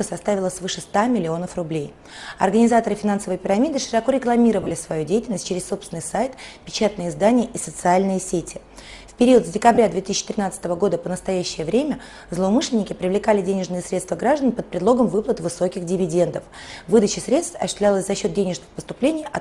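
Lost LE Audio frames interrupt the sound at 2.29 to 2.32 s, at 4.62 to 4.71 s, and at 9.75 to 9.78 s. The decoder fills each gap by repeating the last spectrum with scrambled phase. Any tone in a gap turns into a brief noisy smear. The middle gap is patchy, with the longest run about 20 ms, scattered across 90 ms. The light lossy compression underneath is only faintly audible.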